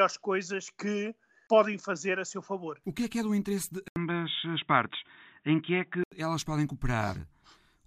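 Speech, with an input switched to a poorer device from 3.88 to 6.12 s: after "é do interesse de" an 80 ms gap opens, then the sound turns boxy with nothing above 3.8 kHz and a faint new noise floor at the same loudness, clearing before "elas podem". The gap and changed noise set it apart from a plain filter, pointing to a likely device change.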